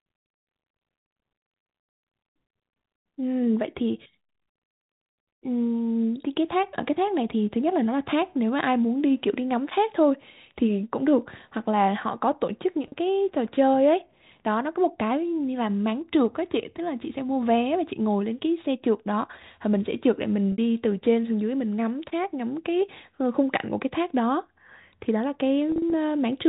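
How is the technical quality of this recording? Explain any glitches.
The recording has three brief dropouts from packet loss with pitch repetition, heard over narrowband telephone audio with nothing above 4 kHz.

Packet loss with pitch repetition occurs at 12.88–12.92 s (40 ms lost), 20.52–20.58 s (60 ms), and 25.72–25.92 s, where 100 ms of gaps are scattered across 200 ms with no run longer than 40 ms. When packets go missing, the receiver loops the last pitch period of the speech to fill the hole. The first and last gaps sound like a short held, buzzy note, and the 60 ms one fades into silence before the speech cross-fades back in.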